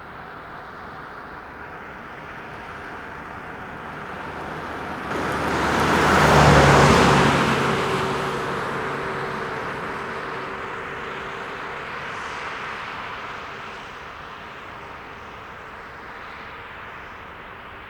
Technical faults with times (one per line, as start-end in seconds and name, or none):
5.11-5.13 skip ahead
9.81-12.60 jitter buffer speed-up